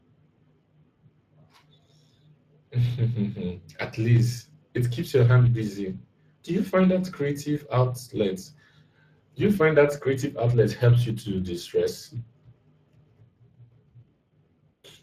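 Speex codec damage runs through the whole speech clip. The speech sounds grainy and hoarse, because the codec models the voice with too few bits for its excitation. The artefacts fit a mid-range setting near 22 kbps. Nothing remains above 15.4 kHz.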